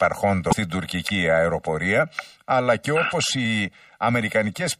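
A hollow, phasey colouring runs through the whole clip. This is channel delay (comb filtering): one channel lags the other by roughly 1.5 ms, and summing them to mono cuts notches starting near 300 Hz. From 0.49 to 0.53 s a brief glitch comes from damaged data in the compressed stream, where the decoder loses sync and jumps to the next frame.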